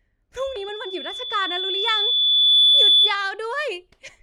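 Loudspeaker feedback squeal runs from 0.36 s to 3.19 s. A microphone is picking up the loudspeaker it drives, and at 3.5 kHz the loop gain rises above one, so that frequency keeps reinforcing itself on each pass. Over about two seconds it swells from a single tone into a piercing single-pitched squeal, ending up roughly 15 dB louder than the speech.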